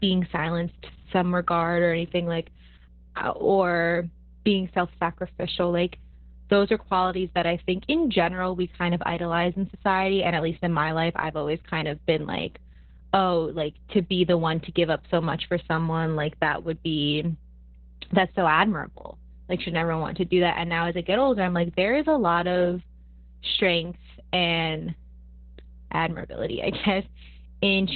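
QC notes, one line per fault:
Throughout, mains hum. A steady 60 Hz tone with some low harmonics sits under the speech. It sits roughly 20 dB below the speech. A ground loop or nearby transformer is feeding the power-line frequency into the signal path.
Throughout, Opus voice compression. The speech is cut off above 4 kHz, so it sounds muffled and boxy. It also has a hoarse, slightly robotic texture. That points to the SILK speech coder running narrowband at a very low bitrate, which fits about 8 kbps.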